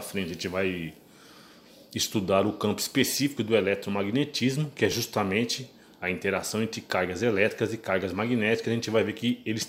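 At 4.92 s the recording software likely failed to collect its input buffer before the hardware overwrote it, a dropped buffer (overrun). A few milliseconds of audio vanish and the surrounding sound is joined straight across, heard as a small jump forward rather than a silent gap.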